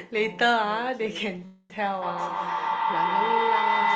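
At 1.45 s the sound stalls for about 0.3 s. It trails off as a fading buzz, goes briefly silent, then resumes right where it left off with nothing lost. That's a call audio freeze, likely from late packets draining the jitter buffer.

From 2.03 s to the end, a feedback howl builds as the mic-to-speaker loop between two devices gains on every pass. It settles into a tone around 1 kHz, pulsing roughly every 150 ms, and peaks about 5 dB above the speech.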